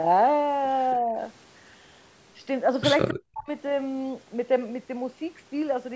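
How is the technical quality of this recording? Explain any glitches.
Two linked call-processing glitches sit close together just past three seconds into the speech, while the band still reaches up to 8 kHz.

Echo leak, 3.08 to 3.13 s: a brief, faint delayed copy of the voice, roughly 15 dB below the speech, arrives about 274 ms late. The likely cause is that a speakerphone's echo canceller let some loudspeaker pickup through. The fixed lag separates it from room reverberation, which trails off smoothly.

Speech suppressed in double talk, 3.13 to 3.49 s: the voice drops sharply, at its deepest around 40 dB, with about 300 ms affected. This is likely an echo canceller muting both talkers while they overlap. Unlike a network dropout, it clings to the overlapping speech and comes straight after the echo.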